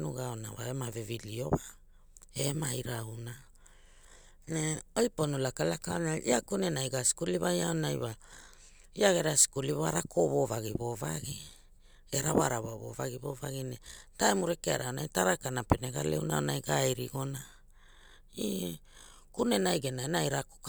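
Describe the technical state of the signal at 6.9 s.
At 6.9 s the speech signal is intact, with no audible technical fault at that moment.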